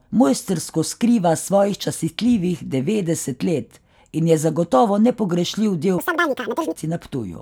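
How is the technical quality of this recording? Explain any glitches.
The speech has one glitch. From 5.98 to 6.76 s it has audio read two samples at a time, at double speed. The reader treats each pair of samples as one frame, as if for two channels. Playback doubles in speed and rises an octave. Any strong content above a quarter of the sample rate folds back.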